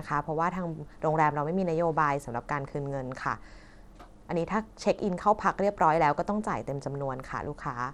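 Throughout, the speech has likely passed through Bluetooth SBC compression starved of bits, fitting 96 kbps: treble flickers and drops out under gritty aliasing.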